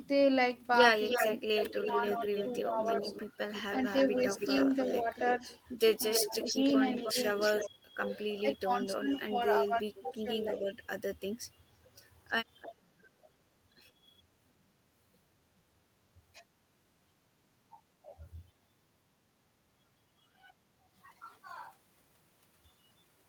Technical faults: echo leak; speech suppressed in double talk; background gated by the echo canceller

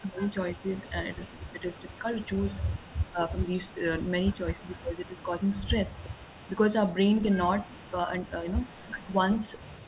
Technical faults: echo leak; speech suppressed in double talk

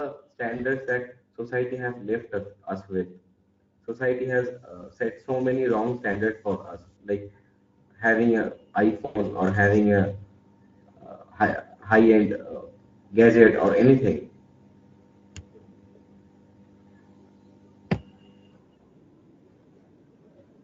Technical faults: Speex codec; automatic gain rising; VoIP packet loss concealed by the speech codec; switching supply whistle

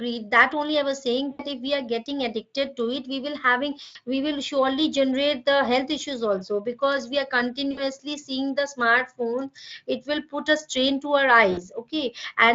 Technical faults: VoIP packet loss concealed by the speech codec

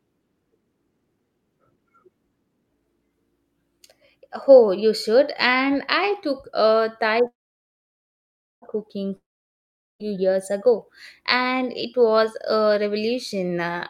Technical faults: call audio freeze; long network dropout

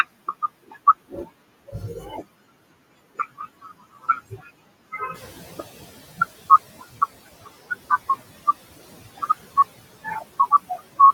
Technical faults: noise suppressor catching up

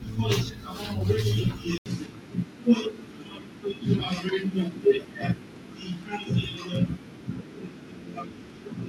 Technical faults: input switched to a poorer device

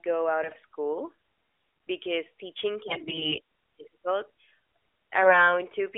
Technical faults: AMR bit errors

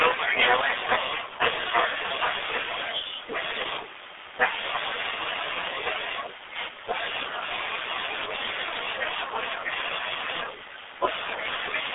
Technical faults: G.723.1 codec

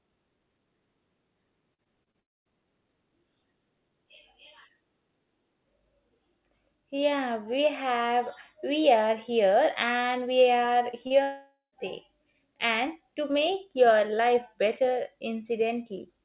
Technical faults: repeated packet loss (robotic sound); long network dropout; short concealed packet loss

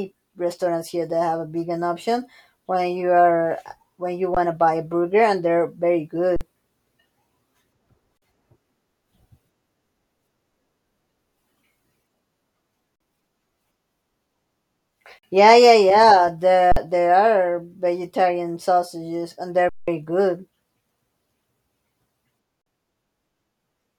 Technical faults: underrun with held sample

